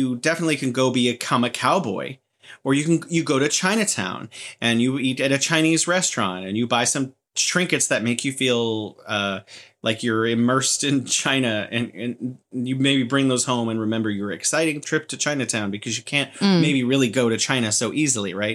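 The converter's sampling clock wanders by a fraction of a microsecond, so each sample of this speech recording is captured slightly early or late at random. That is sample clock jitter, present for the whole clip. Because the timing error matters most where the waveform changes fastest, a faint hiss and grain sits roughly 45 dB under the signal, swelling on loud, bright sounds and sibilants and dropping away in the pauses.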